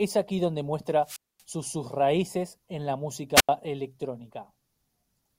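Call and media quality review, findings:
Wireless microphone squelch dropout at 1.02–1.43 s and 3.35–3.49 s. Hiss swells, then near-silent holes of 236 ms and 87 ms. Probable component: analogue FM receiver. RF signal fades, squelch mutes output until carrier recovers.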